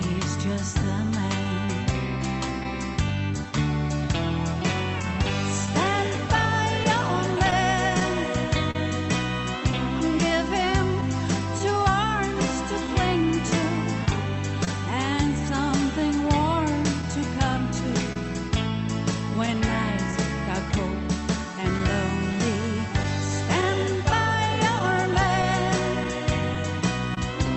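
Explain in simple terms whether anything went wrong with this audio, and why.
Three related problems can be heard, all from how the sound travelled over a call connection.

Clock drift between sender and receiver runs through the whole clip. The sending device's clock ran about one and a half percent slow. The receiver kept getting sound slightly late. It had to keep adjusting to stay in step.

Repeated timing corrections come from that drift. From 1.66 s to 23.99 s, the receiver kept stretching the sound by repeating tiny pieces. Together they add roughly 70 milliseconds. Each repeat is small. You may notice brief hiccups or a slightly uneven pace.

Scattered short gaps appear in three stretches. There are about three between 0.82 s and 2.66 s, and about seven between 5.02 s and 8.76 s, the longest near 40 milliseconds. About twenty more fall between 11.01 s and 27.18 s. Bits of sound went missing. 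The receiver filled each hole by carrying the previous sound forward. These are heard as quick ticks or smears.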